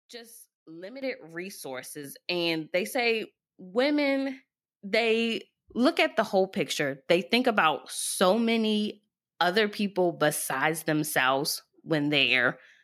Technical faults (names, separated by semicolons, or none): microphone volume stepped up